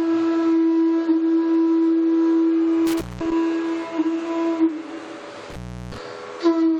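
The audio has two dropouts from an intermittent contact. The first runs from 2.87 to 3.32 s, with the signal gone for about 207 ms. The second runs from 5.50 to 5.98 s, with the line open for about 358 ms. Each has crackle at the edges as the connection breaks and remakes, and faint hiss in between. That pattern points to a loose plug or cable that briefly lost contact.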